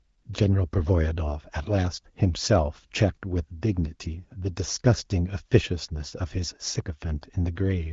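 No technical faults can be heard anywhere in this speech recording. It has passed through the AMR wideband (HD Voice) codec, which leaves only light coding damage and nothing above 7.5 kHz, consistent with one of the codec's higher rates near 16 kbit/s.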